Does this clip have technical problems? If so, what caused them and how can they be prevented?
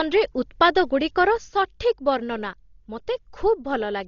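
Yes. Throughout, heavy Dolby Digital compression, likely at a very low bitrate around 32 kbps, stripped detail from the speech: nothing survives above 6.9 kHz, leaving it dull with rough, fluttering noise. Encoding at a higher bitrate avoids this.

At 1.38 s there is a sudden gain jump: a gain setting likely applied without a ramp drops the speech and background together by about 7 dB, staying low to the end. Ramping gain changes over several milliseconds prevents this.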